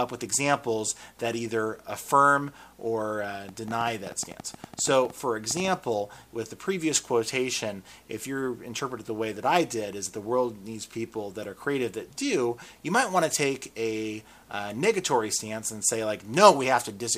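From 3.49 to 5.69 s a train of clicks ticks over the sound, about ten per second at uneven spacing, some twenty in all, peaking a few dB above the signal. The likely cause is interference or a faltering interface. The waveform shows matching narrow spikes, and the spectrogram shows thin vertical broadband lines.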